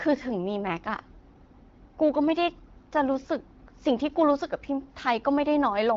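No technical faults are audible.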